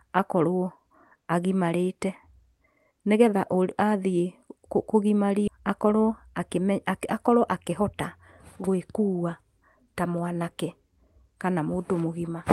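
A skip ahead at 5.47 to 5.49 s drops around 0.7 s of speech. That audio was discarded, in transit or by an overflowing jitter buffer, while later audio already waited, so the sides of the jump are joined almost directly, with no filler and no pause.

A jitter buffer speed-up follows from 5.58 to 6.72 s. With too much audio held, the receiver trimmed short pitch-period pieces again and again, about a tenth of a second in all, so the speech runs at 107% speed, sounding hurried at an unchanged pitch.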